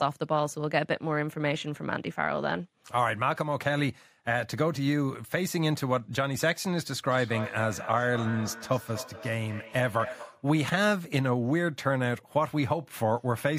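Feedback echo between two devices runs from 7.11 to 10.54 s in this speech clip. The speech comes back at a steady interval of roughly a fifth of a second, with the loudest return about 11 dB below the direct speech. Two devices in the same room are on one call, so one device's speaker replays what the other's microphone sent. That microphone picks the replay up again, and its echo canceller cannot remove sound played by the other device.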